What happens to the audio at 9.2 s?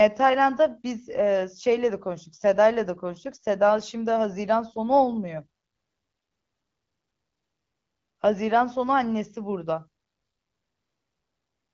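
Nothing goes wrong at 9.2 s; the speech carries on intact through that moment, with only the light coloration of the AMR wideband (HD Voice) codec at 12.65 kbit/s.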